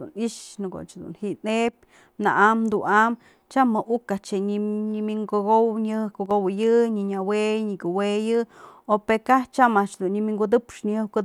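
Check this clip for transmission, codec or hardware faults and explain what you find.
Two short faults appear in this speech clip, at 1.69–1.73 s and 6.26–6.31 s. The likely cause is one channel drops out: a stereo side goes silent for about 50 ms, so after the mono sum the shared speech abruptly falls about 6 dB, a brief dip that snaps back.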